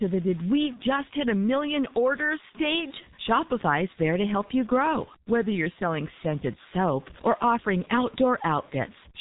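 Throughout the speech, bit errors ride on the sound and pauses fill with hiss, likely a stuck bit; the waveform shows stepped offsets and the spectrogram broadband noise. Also throughout, G.723.1 codec damage is heavy: nothing above 3.8 kHz, fitting about 6 kbit/s, so speech sounds muffled and hoarse, with smeared consonants and a hard spectral ceiling.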